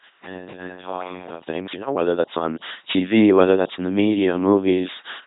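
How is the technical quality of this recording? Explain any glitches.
Pretty rough: the whole clip has gone through a very low-rate vocoder, and the opening stretch sounds like it was picked up from across the room.

The LPC-10 vocoder runs through the entire clip, and the damage is heavy. This codec rebuilds speech from a short filter model excited by either a buzz or a hiss, with each instant forced to be fully voiced or fully unvoiced. That gives the robotic, buzzy character you hear, with stray buzz or hiss wherever the voicing choice goes wrong. Nothing survives above 3.9 kHz, and the overall coarseness fits the 2.4 kbit/s rate.

From the very start until 1.39 s, the sound is hollow and roomy, about 10 dB quieter, and thinner in the bass, with faint room noise sitting well below the speech. Then it snaps back to a closer, fuller sound. That sudden jump is the classic sign of a switch to a distant microphone, likely a camera or room mic covering while the close mic's feed was missing.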